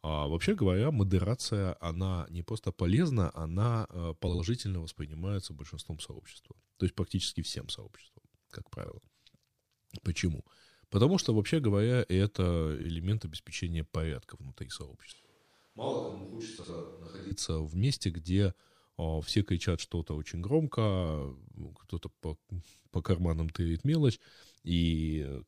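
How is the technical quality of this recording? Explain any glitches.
The recording has two kinds of glitch.

Frames out of order occur at 4.28 to 4.40 s, 8.85 to 8.91 s, 12.80 to 12.86 s and 16.58 to 16.70 s. Adjacent blocks of about 26 or 52 ms were decoded swapped. This gives a garbled flutter.

From 15.12 to 17.31 s the speech turns hollow and roomy. It is about 10 dB quieter, with room noise around 30 dB below it. This is likely a switch to a distant microphone.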